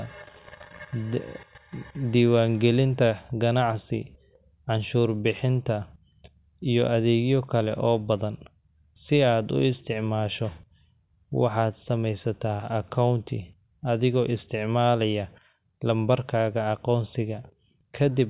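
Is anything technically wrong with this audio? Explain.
No, nothing is technically wrong with this audio.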